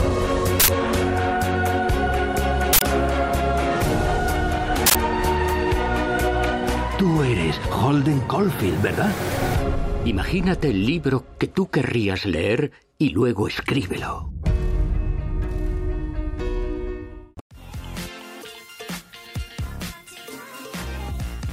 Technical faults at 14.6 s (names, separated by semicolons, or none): none